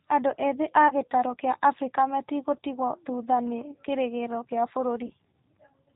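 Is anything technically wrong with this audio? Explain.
Yes. Throughout the speech there is audible G.729 coding damage. A low-bitrate vocoder, probably G.729A at 8 kbit/s, rebuilds each 10 ms frame from a vocal tract filter, pitch predictor and a few pulses. This leaves a rough, synthetic edge and nothing above 4 kHz. Unlike plain low-pass filtering, the voice itself sounds manufactured, not just muffled.

There is also VoIP packet loss concealed by the speech codec, at 0.88 to 0.93 s and 5.06 to 5.12 s. The decoder stretches its last pitch and filter with falling gain, fitting about 20 ms lost once and about 40 ms lost later. This produces a brief, fading smear of buzzy tone or coloured noise with weak recovery, not a silent dropout or click.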